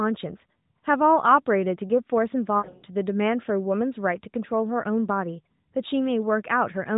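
A speech clip carried over a narrowband AMR mobile link, with nothing above 4 kHz and only light coding buzz. From 2.58 to 2.83 s there are lost AMR speech frames. Over about 240 ms the voice repeatedly smears, warbles and dips. The decoder is filling gaps by repeating its last good pitch and tract settings at falling gain. The longest gap is 60 ms, so the sound never fades fully to silence. About 180 ms is missing in total, which fits roughly nine lost 20 ms frames.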